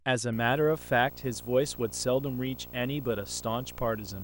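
A speech clip carrying a steady buzz with a hash layered over it from 0.33 s to the end, plus a whine at 15.7 kHz. This is video or display buzz: a screen or video cable couples into the audio at the 59.94 Hz field rate and the line rate, sitting roughly 15 dB below the speech.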